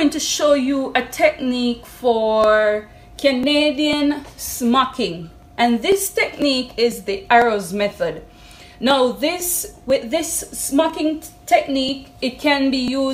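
From 2.44 s to 12.88 s the audio carries periodic USB or driver dropouts: a short run of samples, a couple of milliseconds each time, is skipped outright, roughly every 0.50 s, around twenty times in all. Each skip joins two non-adjacent points of the waveform, so the discontinuity is heard as a small, evenly spaced tick against the signal. The fixed interval suggests a recurring background task stalling the bus or audio driver.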